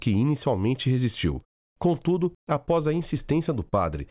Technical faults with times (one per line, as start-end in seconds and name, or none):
none